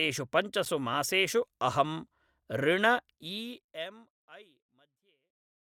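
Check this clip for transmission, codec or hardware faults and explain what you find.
One fault. At 0.65 s there is a gap at a join of encoded pieces: an 8.7 ms silence left where separately encoded segments met untrimmed, briefly cutting the speech with smeared edges. The smooth fade-out from around 3 s to the end is deliberate editing.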